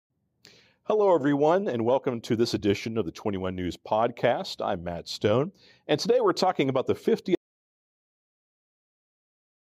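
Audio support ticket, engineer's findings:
Audio dropout to silence, 7.35 s to end of clip. Speech cuts off mid-flow into silence, no room tone. Likely input loss while the recorder kept writing zeros.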